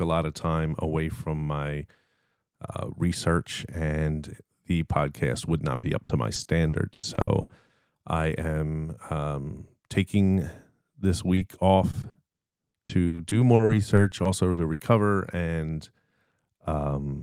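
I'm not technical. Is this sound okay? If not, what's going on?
No, it has a few connection hiccups. From 5.75 to 7.71 s, and again from 11.91 to 14.81 s, there's repeated packet loss, which gives a robotic sound. Bits of the speech keep going missing, ten times in the first stretch and eighteen in the second. Each hole gets patched by stretching the previous sound, so it turns choppy. At about 11.35 to 11.39 s there's a short concealed packet loss, a single tiny dropout lasting a few hundredths of a second that was smoothed over and comes through as a quick smear or wobble.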